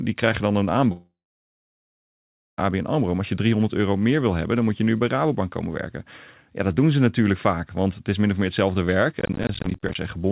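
Speech carried over a narrowband call path with nothing above 4 kHz, with two faults. From 0.92 to 2.59 s there is a long network dropout, likely from packets that never arrived: the last sound smears briefly into a fading buzz, then roughly 1.4 s of silence, and speech resumes with about 1.7 s missing. That single long hole with a decaying tail sets it apart from the brief gaps of processor trouble. From 9.20 to 9.95 s, processor overload crackle appears as a gritty tearing over the speech. Dozens of tiny silent gaps in a row, fitting missed deadlines on buffers of roughly 10 ms, produce sharp clicks rather than one continuous loss, and the crackle stops once the load eases.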